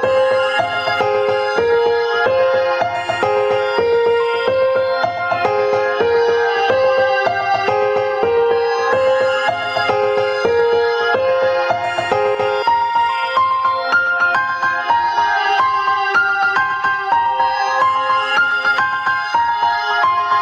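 Gain pumping runs through the whole clip: the gain ducks by around 15 dB under every loud sound, likely from input gain set far too high with a fast limiter reacting. Unlike a noise gate, pumping turns the level down rather than muting the gaps.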